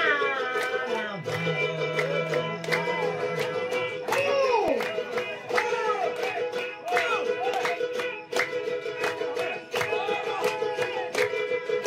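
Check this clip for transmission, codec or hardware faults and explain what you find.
One fault is present: CD scratch ticks. Between 4.32 and 5.23 s there are six short ticks, roughly six per second, each only a couple of milliseconds long. A scratch or blemish on the disc damages more data than error correction can restore. The damage passes under the laser once per revolution, so the gaps repeat at the rotation rate. The player fills or mutes the missing samples, leaving brief regular clicks in the audio.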